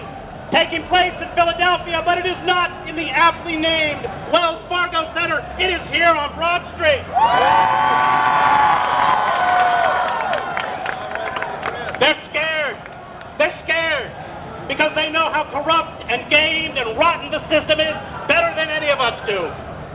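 Nothing here goes wrong at any point, and the audio simply carries the narrow, telephone-style sound of a call line, with nothing above 4 kHz, much as a 64 kbps G.711 A-law link would give.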